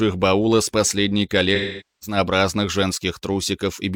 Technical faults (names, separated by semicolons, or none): AAC frame loss with concealment